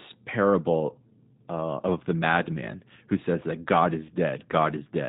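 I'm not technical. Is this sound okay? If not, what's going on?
No. The whole clip has passed through the G.729 codec, a phone-call speech compressor that rebuilds the voice from a simplified model and drops everything above 4 kHz, so the speech is plainly audible as muffled, rough and somewhat synthetic throughout.

At 4.07 to 4.12 s there is VoIP packet loss concealed by the speech codec. About 20 ms of audio went missing, which fits one lost packet. The decoder stretched the preceding sound into a fading tone or noise to cover the gap.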